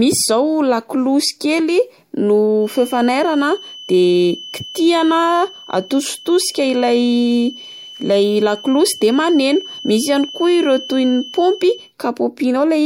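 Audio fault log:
2.57–11.94 s, feedback whistle: a thin, steady 3 kHz tone sits about 20 dB below the speech. A loudspeaker-to-microphone loop likely hovers just short of runaway.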